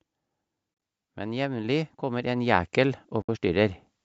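Brief soft-edged dropouts break up the speech from 0.74 to 0.82 s, about 60 ms of sound gone in short gaps, the longest around 30 ms. A cleaner gap of about 70 ms follows at 3.22 to 3.29 s. This is AAC frame loss with muting: the decoder zeroed the missing frames, and the overlapping windows fade the sound out and in.

From 1.14 to 3.79 s, the voice and background swell together by about 10 dB. This is automatic gain rising, as the gain control slowly raised a level it judged too quiet.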